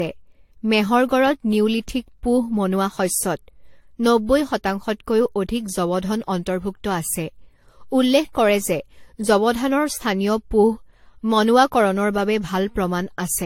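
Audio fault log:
throughout: generation loss. The speech sounds swirly, smeared and hollow, with blurred consonant attacks and nothing above 16.5 kHz. It is likely from about four rounds of lossy re-encoding, consistent with AAC-LC near 64 kbit/s, each pass requantising on a shifted frame grid.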